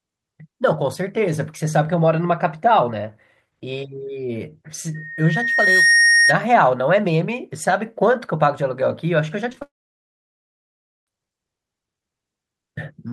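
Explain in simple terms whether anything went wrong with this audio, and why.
From 4.94 to 6.40 s there's loudspeaker feedback squeal: the mic picks up its own speaker, and a 1.9 kHz tone swells over about a second into a whine.

At 9.50 to 9.62 s, repeated packet loss makes the speech choppy and robotic. Several little holes get patched by stretching the previous sound.

Then from 9.62 to 11.08 s the sound briefly smears, then goes silent for well over a second before speech returns, with that stretch simply missing. A long network dropout is the likely cause.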